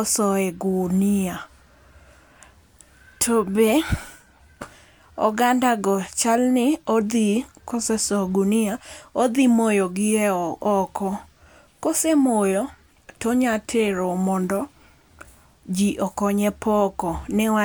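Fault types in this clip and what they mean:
No faults detected in this speech recording.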